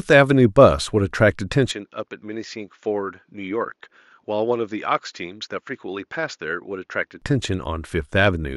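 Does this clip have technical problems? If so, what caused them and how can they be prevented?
Yes. From 1.71 s to 7.22 s the speech turns duller and quieter, with no gap at either transition, which points to the input likely switching to a poorer device and then back. Above 7.1 kHz the content vanishes, and the level drops by roughly 10 dB under a faint new noise floor far below the speech. On a spectrogram, a flat ceiling sits at 7.1 kHz; the waveform visibly shrinks for that stretch. Preventing this means pinning the recording input to one fixed device and disabling automatic device switching.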